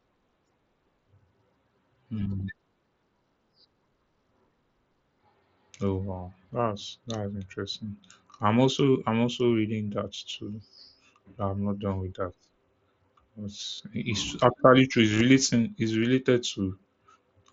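Concealed Bluetooth headset packet loss at 13.72 to 13.80 s, just before "it's actually true", and 15.07 to 15.21 s, just after it. Lost headset packets were filled by repeating recent waveform, leaving brief buzzy, held stretches and a small warble as real audio resumes.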